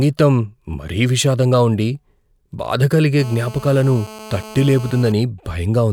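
From 3.19 to 5.12 s, GSM phone buzz: a nearby handset's 217 Hz call bursts, rectified by the audio circuit, give a steady, raspy, harmonic-rich buzz about 19 dB below the speech.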